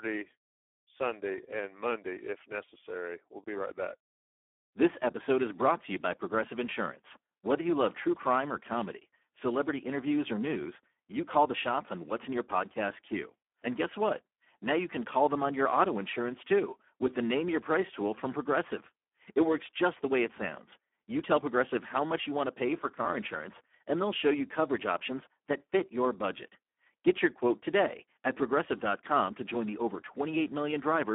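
Across the whole recording, the speech is carried by the Speex codec at a low bitrate that fits about 8 kbps. With so few bits for the excitation, the voice sounds heavily hoarse and noisy. Band-limiting confines it to roughly 250 Hz to 3.4 kHz, with nothing above 3.7 kHz.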